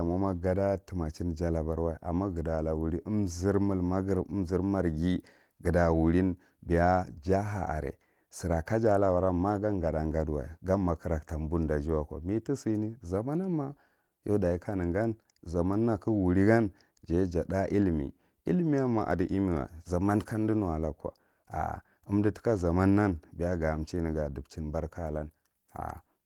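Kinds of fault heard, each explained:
No faults of any kind are heard here.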